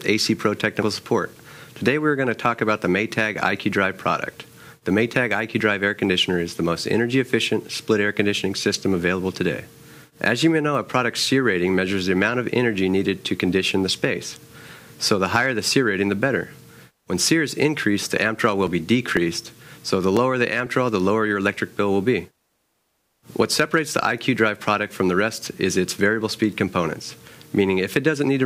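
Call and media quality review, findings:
Periodic USB or driver dropouts, 18.17–20.66 s. A background task stalls the USB bus or audio driver every 0.5 s, and about seven short chunks of audio, each around a millisecond, are skipped rather than padded. The stream jumps ahead at each stall, leaving a regular ticking at a steady half-second rate that is audible only while signal is present. Probable component: USB audio interface or its driver being starved by a recurring system process.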